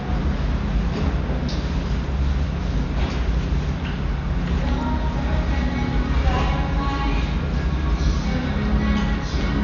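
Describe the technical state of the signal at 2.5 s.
At 2.5 s the sound carries the same heavy codec damage present across the whole clip, likely from Dolby Digital compression at a very low bitrate, which fits roughly 48 kbps. Nothing remains above 6.9 kHz, so the top end is dull. With so few bits, the encoder has left many frequency lines without mantissa data, and the decoder fills them with dither noise, producing a rough, fluttering grain around tonal components.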